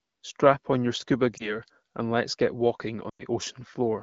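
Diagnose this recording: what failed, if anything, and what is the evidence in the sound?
Network stage: lost AMR speech frames. After "on your scuba", one lost frame leaves a brief dip or warble from 1.37 to 1.56 s. After "and let's get walking", a five-frame run drops to near silence from 3.09 to 3.22 s. Radio errors corrupted the frames. The AMR-WB decoder then repeated the last pitch and vocal tract settings at falling gain.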